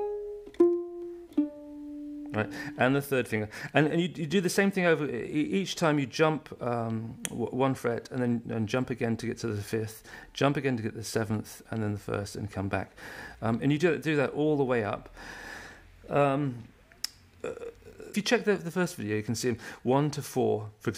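No technical faults can be heard anywhere in the signal.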